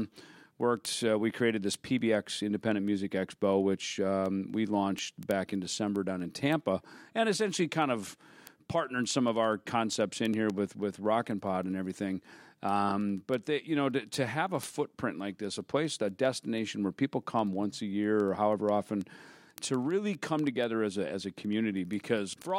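From 0.12 s to the end, the speech carries word clock ticks: sharp clicks of uneven strength at a steady rate of roughly fourteen per second. An unlocked receiver clock, off by around 300 ppm, slips one sample at each tick. Their even spacing distinguishes them from random crackle.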